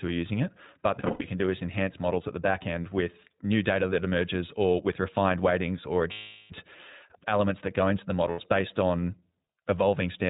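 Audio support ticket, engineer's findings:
Whole clip: speech muffled, nothing above 4 kHz, with a plainly audible rough, slightly synthetic edge. Probable component: iLBC codec, narrowband, each frame's excitation coded independently; the sound fits the 15.2 kbps mode with 20 ms frames.

0.99–1.26 s, before "can do is enhance": broken, buzzy held-vowel patches over about 240 ms, longest run around 70 ms. Lost iLBC frames, roughly 180 ms missing, concealed by repeating the last pitch cycle mixed with noise.

6.12–6.52 s, after "with refined weightings or": sustained buzzy/breathy vowel fading out over about 380 ms. Lost iLBC frames; concealment decays as the loss lengthens.

8.30–8.40 s, between "that go into the" and "based on": short held buzz, about 80 ms. Lost iLBC frames; speech is clean again almost immediately because frames decode independently.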